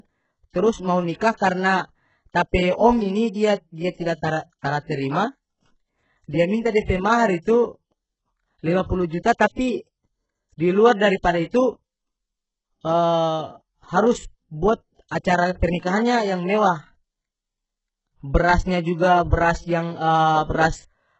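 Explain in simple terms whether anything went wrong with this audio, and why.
Two things went wrong with this speech, and both come from squeezing the file down hard.

The first runs through the whole clip. The top end sounds fake and grainy, and nothing real reaches above about 8 kHz. That points to heavy HE-AAC compression as the likely cause. This kind of codec keeps only the lower part of the sound properly. It then fakes the treble by copying lower bands upward and roughly reshaping them. The copied highs don't quite match what's underneath, so the brightness sounds off rather than natural.

The second is pre-echo, which shows up five times: around 1.18 s, 7.42 s, 9.38 s, 15.08 s (just before "acara pernikahannya yang"), and 19.30 s (just after "brasnya juga"). The codec works in small chunks and spreads its noise across each whole chunk. When a sharp sound lands near the end of one, a brief hiss leaks in just ahead of it, about 17 to 36 ms early. 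The attack itself also comes out softened.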